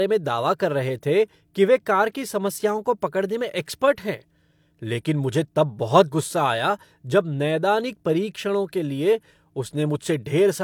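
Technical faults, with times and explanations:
No technical faults can be heard anywhere in the recording.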